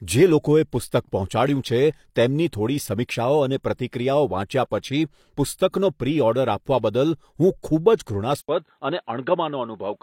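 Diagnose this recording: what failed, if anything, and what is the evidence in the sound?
Codec stage. At 3.63 s there is pre-echo: a short hiss about 15 ms long, just ahead of a sharp attack in the speech. A transform codec spread quantisation noise across its block. The noise meant for the loud attack leaked into the quiet moment before it.

Driver or capture stage. At 8.41 s the sound drops out for 80 ms, then turns dull through to the end. Nothing is left above 4.1 kHz. The level falls by about 5 dB, and new background noise sits about 55 dB below the signal. The likely cause is an input switched to a poorer device.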